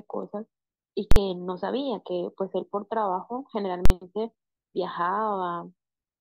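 At 1.12 s and again at 3.85 s the speech is cut by a hard bang, each lasting about 46 ms: invalid numbers at full scale. A calculation produced infinite or invalid values that were clamped to the extreme output level for a whole processing block, which fits a 2048-sample block. On a waveform each shows as a flat slab pinned at one extreme, far beyond the speech peaks; on a spectrogram, bright vertical lines at both edges with the speech missing between them.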